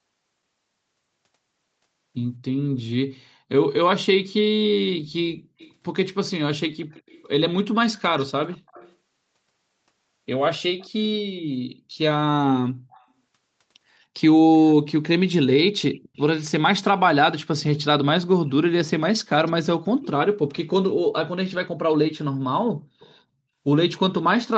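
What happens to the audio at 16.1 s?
Around 15.95 to 16.23 s there's an echo leak: a faint copy of the speech trailing about 213 ms behind, likely far-end loudspeaker pickup the echo canceller missed.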